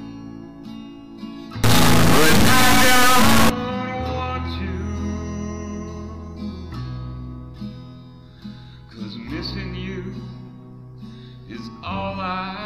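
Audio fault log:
1.64–3.50 s: integer read as float. The sound turns into a harsh, extremely loud buzzing square wave slamming between silence and the clipping limit. The sample bits point to 32-bit integer data interpreted as 32-bit float, producing near-zero, invalid or huge values instead of the waveform.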